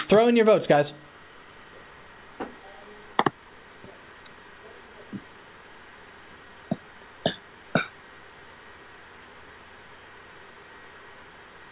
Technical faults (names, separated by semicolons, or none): none